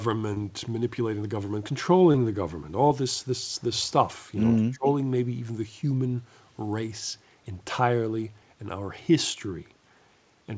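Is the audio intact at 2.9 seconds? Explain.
No. Between 2.88 and 2.92 s there is a short concealed packet loss. About 20 ms of the speech stream missed the decoder's deadline, so the receiver synthesised a 20 ms patch by extending the preceding sound, pitch-continued if voiced or as shaped noise if unvoiced, then crossfaded back into the real signal. It comes through as a brief smear or wobble, and any short consonant in that gap can go missing, within the G.722 path's 8 kHz bandwidth.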